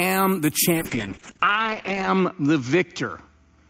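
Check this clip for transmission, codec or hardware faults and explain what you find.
One transmission fault is present: a call bitrate drop from 0.72 s to the end of the clip. The call's bandwidth estimate fell, forcing the encoder onto a far smaller bit budget, consistent with a fall from about 64 kbps to 8 kbps. It codes more coarsely and narrows the audio band from 20 kHz to 8 kHz, so the speech turns muffled and watery. The worst stretch lasts about 1.36 s, and the sound does not recover before the clip ends.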